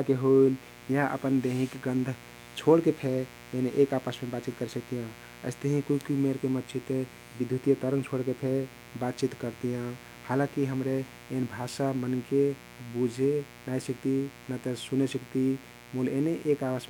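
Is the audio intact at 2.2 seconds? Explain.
No, mains buzz runs through the whole clip: switching spikes twice per 60 Hz cycle add raspy harmonics into the kilohertz range, sitting well below the speech, unlike a smooth low hum.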